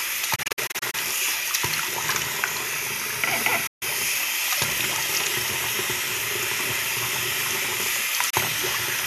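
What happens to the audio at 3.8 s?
Right around there the audio drops out. It's a digital broadcast dropout running from about 3.67 to 3.83 s. The receiver stopped getting clean frames, either because the signal went or because frames failed their checksum, so it muted until good ones arrived. You hear a very quick fade, roughly 8 ms, into a silent hole, and then the sound picks up again further along. About 144 ms of material is simply gone, which fits roughly six lost frames.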